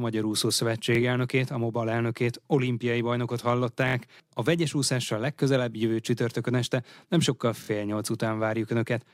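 At 0.95 s, just before "elnökét a", a repeated buffer sounds once more. At 3.88 s, after "elnökét olimpiai bajnokot", it repeats three times. At 7.64 s, after "csütörtökön este nem sokkal", it repeats twice. Each 23 ms piece, which fits a 1024-sample buffer, replays because fresh audio arrived late. Hard joins give a brief stutter.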